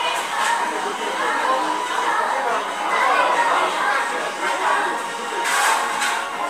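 Listening to this recording of everyday sounds, nothing stood out as a technical problem.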